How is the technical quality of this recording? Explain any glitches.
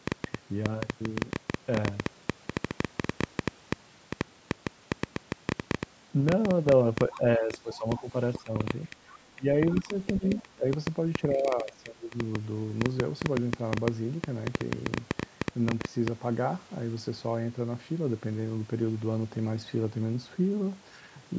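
The recording has three kinds of glitch: a long run of clicks and, during the middle of the speech, several dips in the talker's level plus brief traces of a second voice.

A train of clicks runs from 0.08 to 16.09 s. It averages about 7.6 clicks per second, at an irregular pace, roughly 150 in all. The clicks have a similar shape. Some peak about 20 dB above the speech. They tick over the talking and through the pauses. The likely cause is interference from nearby equipment or a faulty connection or power supply, injecting the same pulse again and again.

Speech suppressed in double talk occurs three times: 7.1 to 8.96 s, 9.35 to 10.67 s, and 11.23 to 12.16 s. The talker's level sinks by about 15 dB, about 20 dB and about 15 dB. Each time, parts of the speech dip or break up in pieces. The likely cause is an echo canceller confused by both sides talking at once. It could not tell the talker from the loudspeaker echo, so it turned both down.

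The other side's voice leaks through twice, from 7.72 to 8.02 s and from 10.36 to 10.42 s. These are short scraps of a second voice under the talker. They sit about 20 dB and about 15 dB below the speech. They fall inside the suppressed stretches. The likely cause is that the call's echo canceller left some loudspeaker sound in the microphone signal.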